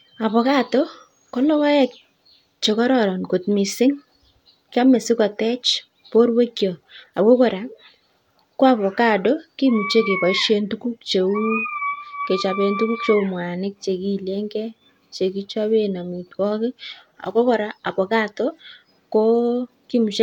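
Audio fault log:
No faults are heard in this speech recording. Nothing in it calls for an entry in the log.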